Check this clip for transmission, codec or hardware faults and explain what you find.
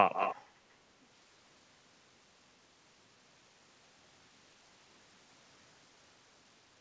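One fault stands out: a brief echo leak near the start of the speech. From 0.13 to 0.36 s a fainter, delayed copy of the talker trails the original by about 228 ms, sitting about 10 dB below it. The likely cause is a far-end loudspeaker whose echo canceller let some of its microphone pickup through and sent it back. On a spectrogram this shows as a weaker duplicate of the speech harmonics shifted right by roughly a quarter second. In the waveform it appears as a smaller envelope overlapping the tail of the direct sound. The band stops at 8 kHz, as expected from a G.722 call path.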